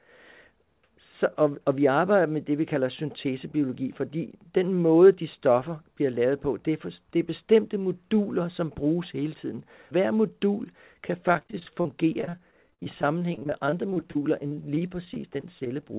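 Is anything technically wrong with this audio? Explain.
Yes. From 11.28 s to 15.91 s there is repeated packet loss, heard as robotic sound. About fifty short gaps, each under 50 ms, are patched by stretching the preceding sound. Roughly a fifth of that stretch is filled this way, so the speech turns choppy. The audio's cut-off at 4 kHz fits a G.711 telephone codec.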